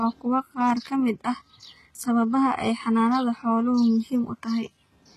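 Throughout the speech, the treble sounds synthetic. Nothing is present above about 12.4 kHz. The upper band does not ring true, and s sounds come out gritty and lispy. The likely cause is HE-AAC compression. That codec keeps only the lower spectrum and rebuilds the top by copying lower bands upward under a coarse envelope, so the harmonics no longer line up. The damage is plainly audible, which fits a bitrate near 16 kbps.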